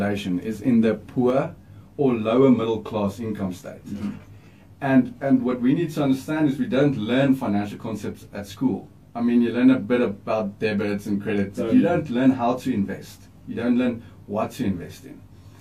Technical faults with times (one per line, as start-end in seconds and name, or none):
1.30-15.60 channel delay (comb filtering)